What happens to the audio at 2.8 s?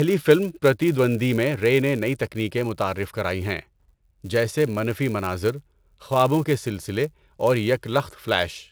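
At 2.8 s the speech carries a filter restarted on every block, a fault that runs through the whole clip. The filter starts each block from silence, so every block opens with a small transient, heard as a buzz at 188 Hz, which fits a 256-sample block. Unlike mains hum, the buzz rises and falls with the level of the speech.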